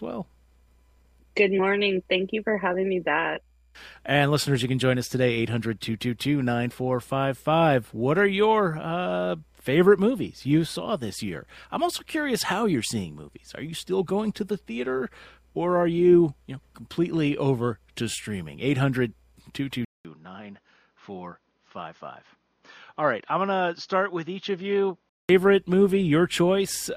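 At 19.85 s a 200 ms silence breaks the audio, and until 25.29 s it sounds duller and quieter, likely because the input switched to a poorer device. A spectrogram shows nothing above 6.6 kHz and a new noise floor roughly 45 dB down. The waveform shrinks by about 5 dB.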